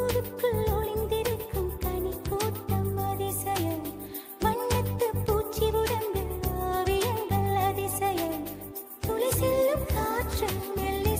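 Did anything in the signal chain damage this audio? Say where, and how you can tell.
No, nothing along the chain seems to have damaged this audio, so there's no stage to point at.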